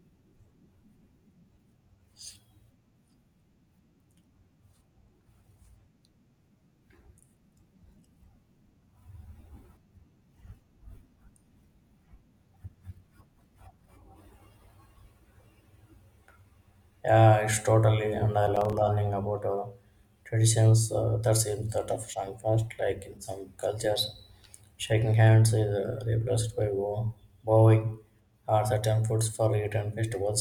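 Right after "it's totally and I", from about 18.47 to 18.73 s, there's a burst of processor overload crackle. The processor kept missing its deadlines for a handful of tiny buffers, roughly 5 ms each, leaving short silent holes with hard edges. You hear a gritty tearing until "learning about uh traditions".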